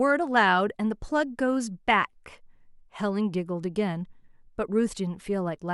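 No technical faults can be heard anywhere in this speech recording. Nothing in it stands out at any moment as needing a time stamp or an explanation.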